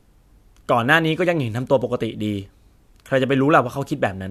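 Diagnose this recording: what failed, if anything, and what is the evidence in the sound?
Nothing failed: no stage of the chain leaves an audible fault anywhere in this speech recording.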